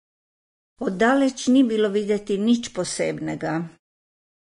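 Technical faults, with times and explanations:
Throughout: Vorbis compression. The speech has nothing above 10.6 kHz, and the remaining upper band sounds hissy and grainy, with roughened tones and softened consonant onsets. This is likely low-quality Vorbis coding, at a rate that fits roughly 25 kbps. The encoder drops everything above the cut-off and quantises the treble residue so coarsely that fine detail is replaced by noise of similar energy, leaving a plainly audible smeared texture.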